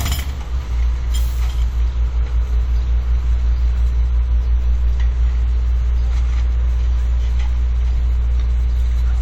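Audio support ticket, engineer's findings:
Lossy transform coding across the whole clip, likely WMA compression at a low rate, consistent with about 48 kbps. Quantisation noise smeared over long blocks gives plainly audible ringing, washy texture and signal-following hiss. Bandwidth extends to 20.1 kHz.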